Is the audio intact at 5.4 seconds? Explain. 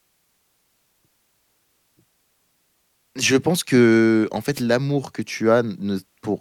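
Yes, the speech plays through cleanly at 5.4 seconds, with no audible fault at that moment.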